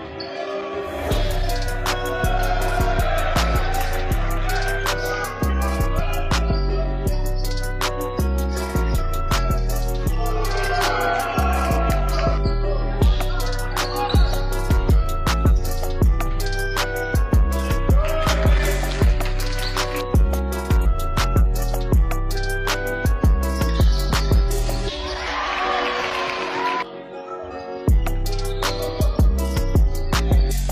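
At 5.95 to 6.01 s, 11.52 to 11.57 s, 20.81 to 20.86 s and 24.06 to 24.11 s, compressed frames are skipped. The decoder drops whole frames, either because they were missing or because it rejected them as damaged. Each frame lasts 46.4 ms. About one frame goes each time, except at 20.81 s, where about two go. The sound jumps ahead abruptly.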